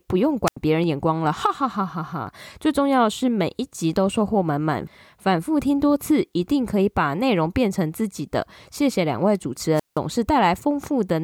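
At 0.46 s the analogue radio link from the wireless microphone fades far enough that the receiver's squelch cuts the output, a wireless microphone squelch dropout lasting until 0.57 s. Hiss swells briefly, then the speech falls into a hole of near silence for about 86 ms before returning. The same squelch dropout recurs from 9.74 to 9.99 s, this time with the mute held for about 172 ms, a longer gap in the speech.

Between those dropouts, at 0.84, 2.27 and 4.99 s, the stream likely loses a fraction of a millisecond of samples each time, the dropped samples fault, so the waveform jumps straight from one value to a later one. Each loss is far too short to take away any audible speech. Each is heard as a single sharp click, showing as a thin vertical line on the spectrum.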